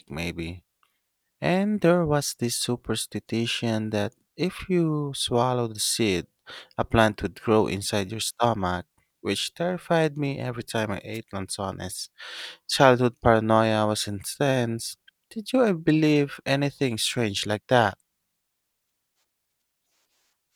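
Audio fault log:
11.13–11.19 s, wireless microphone noise hit: a brief swish of static after "me every time I" as the FM radio link faded; it is hiss, not silence, unlike a dropout.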